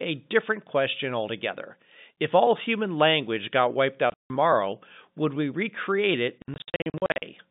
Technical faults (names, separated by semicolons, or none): packet loss filled with silence